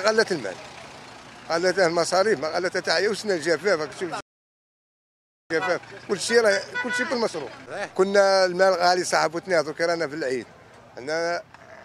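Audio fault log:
4.21–5.50 s: playback stall. The sound cuts off abruptly mid-flow and the output stays silent for 1.3 s before audio returns. The likely cause is the player running out of buffered data or its output thread being blocked, leaving nothing to play until it recovered.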